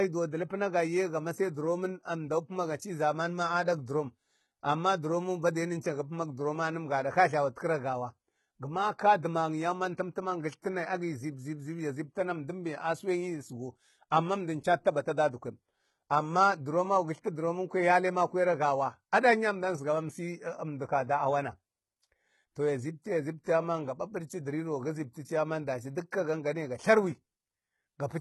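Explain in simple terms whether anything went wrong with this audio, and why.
Throughout the whole speech recording, the s sounds and the highest treble come out gritty and metallic. Their brightness doesn't blend naturally with the lower part of the sound. The likely cause is heavy HE-AAC compression, which rebuilds the treble by copying lower frequencies upward instead of keeping the original.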